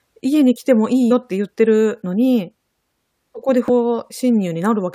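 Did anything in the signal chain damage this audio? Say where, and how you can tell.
Yes. The damage is in storage or transfer of the compressed file, at the codec stage: damaged data in a compressed stream. At 1.10 s and 3.68 s the speech breaks abruptly, each break lasting under 20 ms. There the decoder hit corrupted frames, misread them and resynchronised on the next valid frame header. Network packet-loss concealment would smear or repeat earlier sound. These are abrupt breaks, not fades or repeats.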